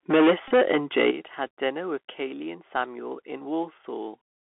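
The whole recording runs through a Bluetooth CVSD headset codec, and you can hear it throughout. It's the narrowband headset link, sending one bit per sample at 64 kHz that just says up or down while the step size adapts. The band here sits roughly between 250 Hz and 3.4 kHz, so there's no air on top. The s sounds come out scratchy, and a grainy hiss sits under the speech the whole way.

From 0.09 to 1.1 s there's microphone overload. The peaks run about 13 dB past full scale, with something like a sixth of the samples flattened, so the loudest syllables get a harsh, crackly edge. The input volume was likely set too high, and the converter simply ran out of room.

Right inside that stretch, at 0.11 s, the microphone volume steps down by about 3 dB. Speech and background both drop at once. It's likely the call software reacting to the clipping by pulling the device gain back a notch. It wasn't enough, since the overload carries on after it.

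Between 0.48 and 0.51 s comes a Bluetooth headset packet repeated episode. About 26 ms of audio is lost across a 30 ms window, which fits roughly seven packets. The chip kept decoding the last good packet's bits again, and the longest run, about 20 ms, gives a short buzzy burst near 267 Hz from the 3.75 ms repeat before clean audio comes back.

Then at 1.11 s, right as the overload ends, the microphone volume steps down again, this time by about 10 dB. It's a much bigger, obvious drop in level, likely a second and firmer gain cut after the sustained clipping.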